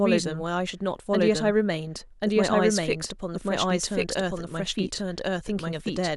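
A second capture path, or an edit holding two out-of-step copies, has most likely mixed the same speech in twice, creating a doubled audio track that runs throughout. One copy trails the original by about a second at roughly equal loudness, so phrases return as a full-band repeat that sounds dry and flat, with no decay or room colour.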